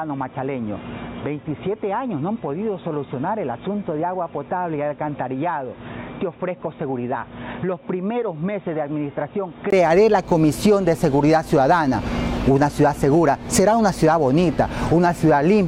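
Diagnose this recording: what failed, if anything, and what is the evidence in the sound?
Input switched to a poorer device, likely at the driver stage: until 9.73 s the spectrogram stops at 3.8 kHz, the level sits about 10 dB lower with noise roughly 40 dB down, and a 20 ms gap marks the change.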